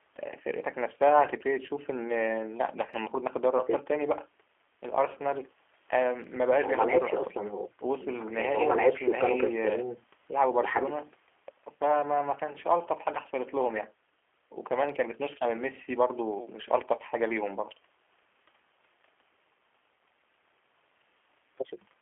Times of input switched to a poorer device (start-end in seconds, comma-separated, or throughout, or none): none